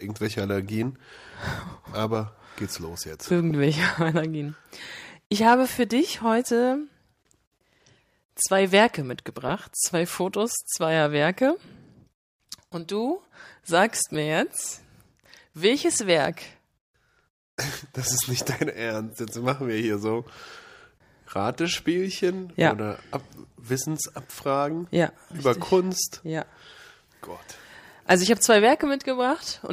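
No technical faults are audible.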